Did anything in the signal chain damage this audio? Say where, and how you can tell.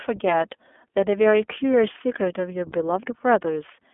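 Yes: the iLBC codec stage, throughout, cuts everything above 3.6 kHz and leaves a rough, synthetic grain from each 20 ms frame being coded independently.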